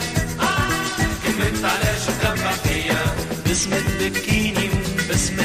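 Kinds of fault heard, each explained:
No kinds of fault are heard in this clip.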